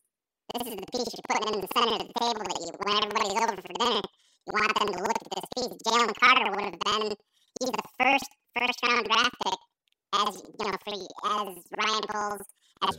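Speech that plays an octave high with a flutter at about 10.8 Hz throughout, the sign of planar audio read as interleaved. Each block of roughly 92.88 ms, which fits a 4096-sample block, plays twice at double speed, left then right, so the overall pace stays correct.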